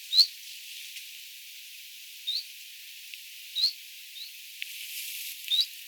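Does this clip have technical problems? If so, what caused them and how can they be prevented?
Yes. There's a block size mismatch (padded) throughout: one stage writes slightly shorter blocks than the next reads, so each block ends in a zero-filled gap. You hear a 91.5 Hz buzz, and the audio runs 0.4% slow with its timbre intact. Matching block sizes across stages prevents it.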